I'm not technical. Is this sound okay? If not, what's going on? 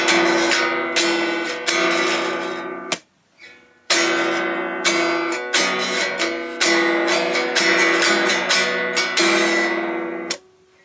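No. Throughout, loud and soft parts end up closer in level, and the sound is squashed. That's gain pumping, likely from the input gain being set too high for the microphone, so a fast limiter keeps pulling it down.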